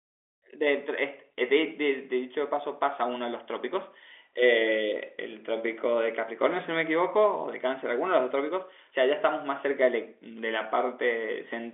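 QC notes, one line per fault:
No faults to note.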